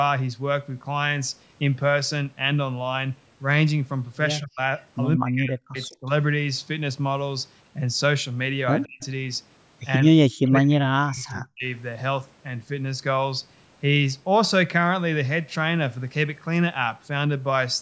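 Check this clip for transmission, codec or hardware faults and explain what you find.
Two faults are audible: speech suppressed in double talk and a faint echo leak, both pointing to a call's echo canceller struggling while both sides spoke.

Speech suppressed in double talk occurs at 4.39–4.6 s, 5.18–6.1 s, 8.85–9.03 s and 10.2–11.65 s. The speech sinks by about 40 dB or breaks into fragments, likely because the canceller could not tell the near talker from loudspeaker echo and attenuated everything. On a waveform, the envelope collapses to near silence in those stretches. On a spectrogram, the harmonic bands fade or vanish in vertical gaps.

The echo leak is heard as brief, faint scraps at 5.81–5.85 s, 9.02–9.06 s, 10.45–10.49 s and 11.2–11.3 s. Each is a copy of speech arriving 168 ms late and sitting about 30 to 35 dB below the direct speech. This is likely residual loudspeaker sound that the canceller failed to remove and sent back. 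A spectrogram shows weak patches trailing earlier energy by that same delay. The waveform shows only tiny bumps. The spectrum stops at 8 kHz, which fits normal call microphone processing.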